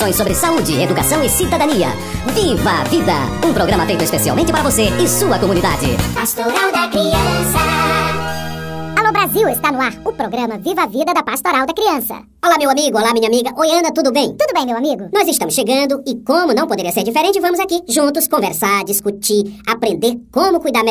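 From start to finish the clip has a wrong sample rate fault: everything runs 1.45 times too fast and sits about 6.45 semitones high. That fits 22 kHz material played at 32 kHz. Unlike a pitch shift or time-stretch, tempo and pitch rise together.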